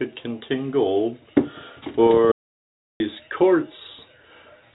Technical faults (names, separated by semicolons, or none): audio dropout to silence